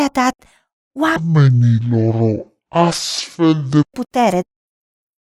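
From 1.16 s to 3.92 s there is a section at the wrong speed. The speech in this stretch runs at about 0.55 times its proper rate, so it drags noticeably and drops by roughly ten semitones, giving a deep, slowed, heavy quality. Pitch and tempo shift together at the boundaries rather than gradually. The likely cause is that this portion was rendered against a mismatched clock, stretching it out.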